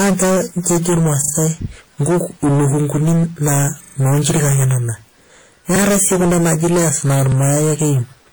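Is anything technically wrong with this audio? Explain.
Yes. Three faults are audible.

Hard clipping runs throughout. The speech was driven about 18 dB past the limit, so roughly a third of samples are cut flat. Every loud sound buzzes with distortion.

Compression damage is plainly audible throughout, likely from WMA at a low bitrate near 48 kbps. Coarse block coding leaves a ringing, washy sound with hiss that breathes.

A repeated buffer occurs at 1.24 to 1.32 s, 3.84 to 3.96 s, 5.76 to 5.8 s (just before "si kuna naji layers") and 7.32 to 7.36 s (just after "kuna naji layers na"). Late audio made the device replay a chunk that fits a 40 ms buffer. The chunk plays twice, three times, once and once extra. Each repeat is a hard-joined stutter.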